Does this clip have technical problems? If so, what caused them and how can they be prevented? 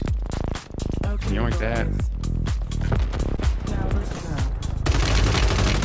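Yes. Short concealed packet loss causes brief smears at 3.36 to 3.39 s and 4.15 to 4.21 s. About 20 ms and then 40 ms of audio arrived too late. The receiver extended the preceding sound to cover each gap. A steadier network or a larger jitter buffer would prevent it.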